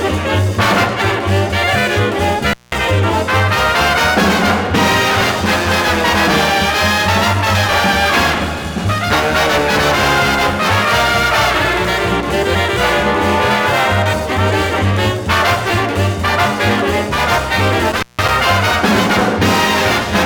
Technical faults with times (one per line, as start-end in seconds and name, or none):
2.50-2.75 intermittent contact
17.91-18.30 intermittent contact